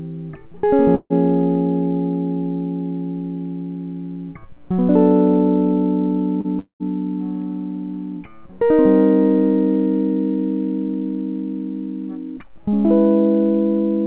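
At 0.95 s a burst of packet loss removes about 150 ms of the music, up to 1.13 s. Several consecutive packets failed to arrive in time, so the receiver extended the last sound it had and attenuated it as the gap continued. The result is a held, fading continuation of the preceding tone that sinks into roughly 30 ms of silence before the music resumes further on, with the intervening passage gone.

From 6.41 to 6.47 s there is a short concealed packet loss. About 30 ms of audio never reached the decoder, and the receiver synthesised a replacement by continuing the prior signal, then crossfaded back into the real stream. It comes through as a brief smear or wobble in the music rather than a clean gap.

Right after, from 6.59 to 6.83 s, about 210 ms of the music is missing. The last sound carries on as a fading buzz or hiss, then gives way to roughly 110 ms of silence before the music picks up again later in the passage. 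The likely cause is a long network dropout, during which no packets arrived at all. The whole clip has nothing above 4 kHz, which fits a G.711 mu-law call path at 64 kbps.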